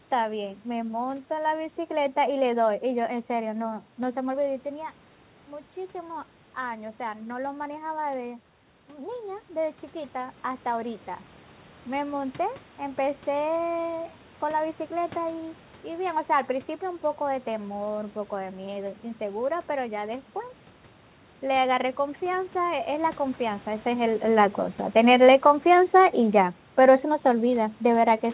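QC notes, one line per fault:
24.97–28.24 s: automatic gain falling. The level eases down by about 4 dB over 3.3 s, and the room noise sinks along with the speech. That marks the gain control backing off, not a talker moving away from the microphone.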